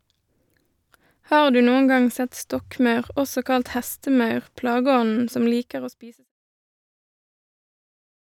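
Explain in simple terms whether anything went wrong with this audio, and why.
Nothing went wrong here.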